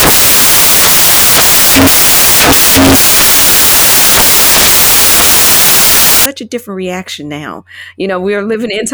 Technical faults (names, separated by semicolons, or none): samples built from the wrong bytes